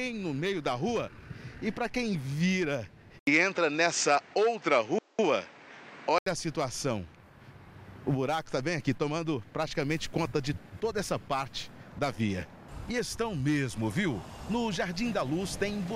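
An input switched to a poorer device runs from 3.19 to 6.26 s. About 80 ms of silence opens the section. After it the sound turns duller, with nothing above 8.6 kHz, a modest shift in level and a faint new noise floor sitting well beneath the signal. This points to a likely change of capture path mid-recording, to a narrower-band microphone or a headset profile carrying its own tone and hiss, before the original input returns at 6.26 s.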